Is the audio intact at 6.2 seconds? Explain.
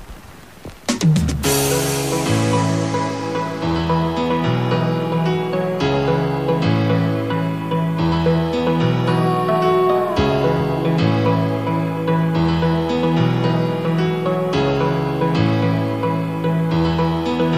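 No, low bit depth without dither runs through 6.2 s and the whole clip: grainy distortion tracks the sound about 35 dB down, likely 8-bit truncation without dither.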